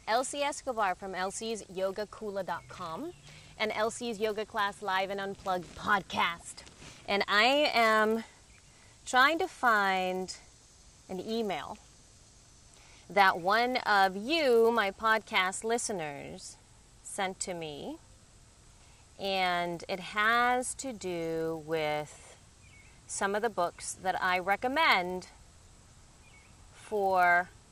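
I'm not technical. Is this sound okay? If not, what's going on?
No. A faint steady buzz, about 100 ticks a second, runs through the whole clip whenever sound plays. It's a resampler restarted on every block: each 10-millisecond chunk was converted separately, leaving a tiny glitch at every seam.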